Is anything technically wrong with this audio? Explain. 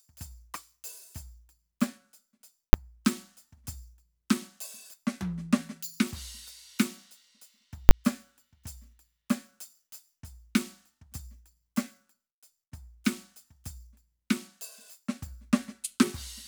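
Yes. The music is broken twice by a hard, very loud bang: once at 2.73 s, and again from 7.89 to 7.91 s. Both are invalid numbers at full scale. A calculation in the processing chain produced infinite or undefined values, which were clamped to the maximum positive or negative sample value. The output sits pinned at the limit for the whole block, 10 ms in the first case and 20 ms in the second. Both blocks are so brief that each one lands as a single bang.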